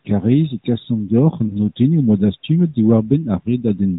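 A speech clip carried over a narrowband mobile link, with nothing above 4 kHz and only light codec roughness, which fits AMR-NB at its 12.2 kbps mode. From 1.48 to 1.57 s there is a brief dip or warble from a lost AMR speech frame. A single 20 ms frame failed its checksum. The decoder filled the gap by repeating the last good pitch and vocal tract settings at reduced gain. The sound then came back weak or rough for a moment before settling.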